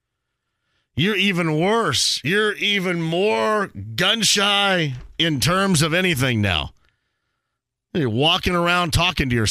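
No technical faults can be heard anywhere in this recording.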